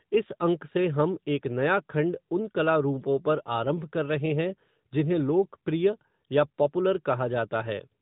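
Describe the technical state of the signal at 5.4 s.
At 5.4 s the speech carries the AMR narrowband mobile codec damage present for the whole clip: nothing passes above about 3.8 kHz, and the vocal-tract model rebuilding each 5 ms from a few pulses leaves a plainly buzzy, synthetic edge. That synthetic quality, beyond mere band-limiting, sets it apart from a simple telephone filter and fits an upper mode near 10.2 kbps.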